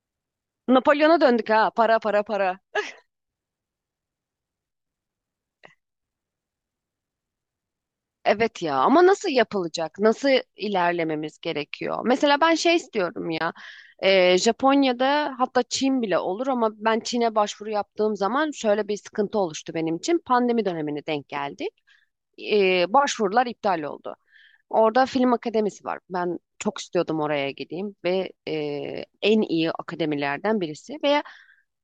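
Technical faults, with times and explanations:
13.38–13.41 s and 26.77 s, AAC frame loss with muting: soft-edged gaps of 30 ms and 10 ms; lost frames were zeroed and faded through overlapping windows.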